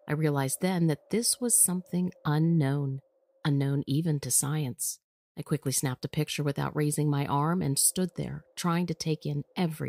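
Nothing stood out as a technical fault on listening.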